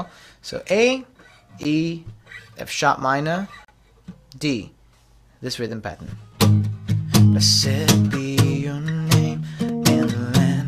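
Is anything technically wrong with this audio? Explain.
Yes. There are gaps between stream segments at 1.63 s, 3.65 to 3.68 s, 5.68 s and 9.69 s. They recur near 2 s boundaries, which fits 2 s segments whose timestamps leave small holes that the player fills with silence. Each is a hard-edged dropout lasting about 14, 35, 6 and 3 ms. No audio is lost. The waveform shows a flat line with abrupt edges, and a spectrogram shows a thin, full-height blank column.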